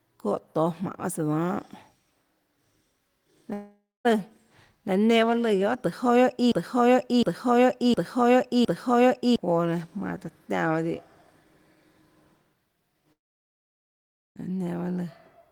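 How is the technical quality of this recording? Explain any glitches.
The recording has clear technical problems: three breaks in the speech where audio is lost, two gaps and one stuck repeat.

At 3.53 to 4.07 s and again at 13.13 to 14.38 s there is a long network dropout, likely caused by packets failing to arrive. The first loses about 0.52 s: the last sound smears into a fading buzz, then roughly 0.23 s of silence. The second loses about 1.24 s and is almost entirely silent. Speech resumes with the missing stretch skipped, not repeated.

From 6.52 to 9.36 s a broken-record loop sets in, likely from a stalled player or stream resending its last buffered piece. A 0.71 s fragment repeats exactly, back to back, four times. Unlike a dropout, nothing fades or goes quiet; the same sound restarts identically, and the speech that belonged there is lost.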